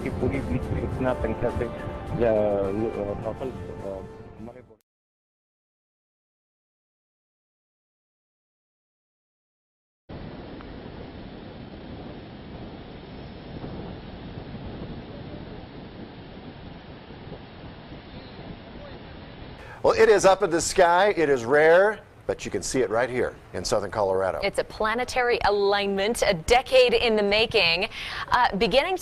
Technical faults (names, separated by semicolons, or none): jitter buffer speed-up